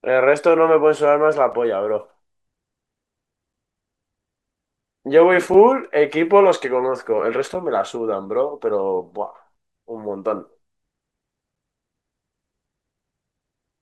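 Short, hard-edged 6.5 ms holes interrupt the speech at 1.52, 3.53, 5.54, 7.54, 9.55 and 11.56 s. This is a gap between chunks: silence is left at each join between 2-second pieces of audio.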